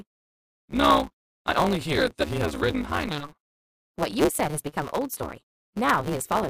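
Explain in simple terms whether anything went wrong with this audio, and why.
A block size mismatch (truncated) runs through the whole clip: one stage hands over longer chunks of audio than the next stage takes, so each chunk's end is dropped, which fits 512-sample blocks. That leaves a steady 150 Hz buzz, and the sound hurries along 1.6 times too fast at roughly normal pitch.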